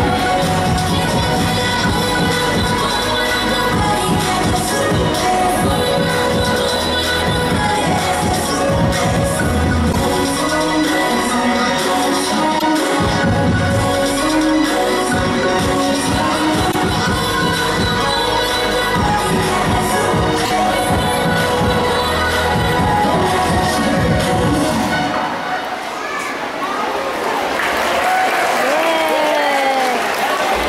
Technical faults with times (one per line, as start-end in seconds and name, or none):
9.91-9.96 repeated frames
12.58-12.62 repeated frames
16.71-16.76 repeated frames
20.44-20.51 repeated frames